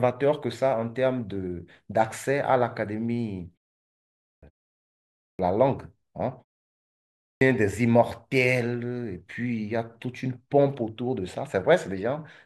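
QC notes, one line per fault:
3.97–4.43 s, 4.94–5.39 s and 7.01–7.41 s, clipped start after a pause: Each of these follows a short silence of 0.48, 0.52 and 0.65 s. The speech then resumes abruptly, with its opening missing. About 0.45, 0.45 and 0.40 s are lost. The output device drops into a sleep state during the silence and needs time to wake and lock again. Until it does, nothing plays, so each first sound is swallowed.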